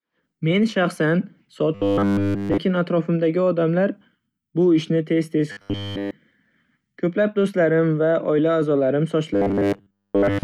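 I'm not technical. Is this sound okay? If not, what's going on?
No. Robotic sound from repeated short buffers at 1.75–2.59 s, 5.52–6.11 s and 9.34 s to the end: the speech turns into a rigid metallic buzz at 100 Hz, likely from a tiny 10 ms snippet being replayed in place of missing audio.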